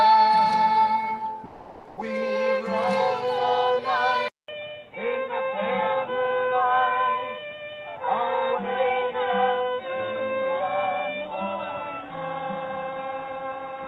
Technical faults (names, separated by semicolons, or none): comfort noise in place of the background; input switched to a poorer device